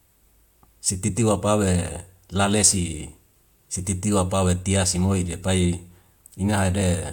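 At 6.81 s, damaged data in a compressed stream makes the decoder lose sync, leaving a brief glitch.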